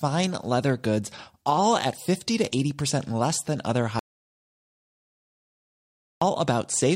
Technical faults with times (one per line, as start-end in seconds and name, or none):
3.99-6.22 audio dropout to silence